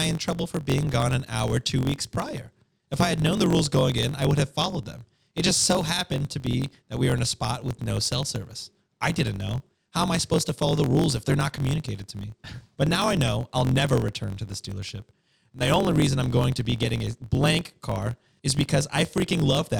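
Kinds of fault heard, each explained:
Block size mismatch (truncated): one stage writes longer blocks than the next reads, discarding each tail, so the speech buzzes at 45.9 Hz and runs 1.07 times fast with its timbre unchanged.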